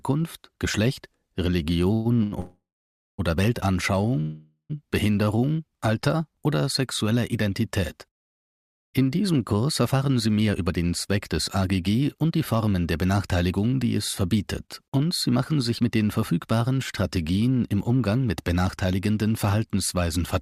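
Packets were likely held up in transit, draining the jitter buffer and causing a call audio freeze at 1.93–2.07 s, 2.40–3.20 s and 4.20–4.72 s. Each time, the last sound is drawn out as a fading buzz or hiss and then resumes where it stopped. The second freeze falls to about 0.58 s of silence and the third to about 0.12 s.

Between them, a short stall from a late packet at 2.23–2.34 s holds a sound on for 87 ms with a slight buzz or dip. A second stall at 14.66–14.70 s stretches one sound by 21 ms.

From 7.48 s to 20.17 s, a jitter buffer speed-up trims tiny pitch-period slices to shed surplus delay, around 0.7 s in total. The sound runs about 5% faster at the same pitch and feels hurried.

At 15.78–15.81 s, short concealed packet loss drops 20 ms that never arrived and fills 6 ms with continued sound, heard as a brief smear or wobble.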